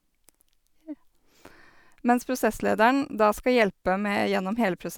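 No technical faults can be heard anywhere in this recording.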